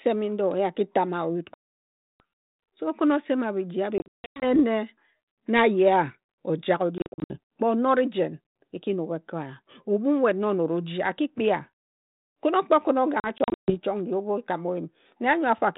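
Packet loss on an ADPCM call cuts hard silent holes at 1.54–2.21 s, 3.98–4.60 s after "okhin osema bhiji", 6.98–7.37 s after "ojak o", and 13.20–13.76 s. The first is one 660 ms gap. The others are broken runs. Each time, the decoder's predictor drifts, so speech returns slightly distorted.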